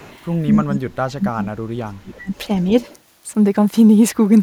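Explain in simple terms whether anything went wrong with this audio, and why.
Echo leak, from 0.00 to 0.18 s, then briefly at 2.34 to 2.38 s and 2.81 to 2.86 s: a faint, delayed copy of the speech slips back in, trailing the original by roughly a quarter of a second at first (243 ms), then 294 ms in the later two scraps. It sits far below the main speech, so it comes across as a quiet ghost. The likely cause is a speakerphone on the far end whose echo canceller missed part of what its microphone picked up and sent it back.

Speech suppressed in double talk, from 0.54 to 1.52 s and again from 1.85 to 2.32 s: the speech drops sharply, at its worst almost to nothing, for about a second and then about half a second. This likely happened because both sides spoke at once, and the echo canceller, unable to tell the talker apart from loudspeaker echo, turned everything down together.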